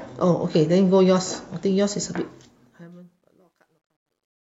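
This speech clip's fade-out, beginning around 2 s, turns gritty from 2.13 s and is worst between 3.12 and 4.51 s. That is truncation distortion on a fade: the gain stage, which fits about 12 bits, lacks dither, so quiet samples collapse into coarse steps.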